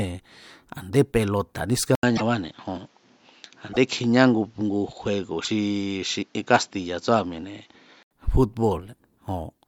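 At 1.95 s the speech goes quiet for about 80 ms, then returns dull and boxy, with nothing above 7.6 kHz and a faint new noise floor well below the voice. The level stays about the same. This is likely an input switched to a poorer device, a narrower-band microphone or headset profile replacing the original input. At 8.11 s the wider band returns.

Within that stretch come three short glitches: 2.15 to 2.21 s, 3.71 to 3.77 s, and 5.44 to 5.48 s. Each is a brief jump forward with a chirp or smeared burst lasting 40 to 64 ms, about two to three 24 ms frames. These are likely from a broken MP3 bit reservoir. After frames were lost, the following frames decoded using borrowed bits that no longer matched, producing garbage until the stream resynchronised.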